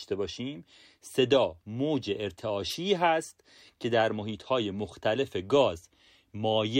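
It's a speech clip with a wireless microphone noise hit from 2.69 to 2.76 s: a brief swish of static as the FM radio link fades and receiver noise rises.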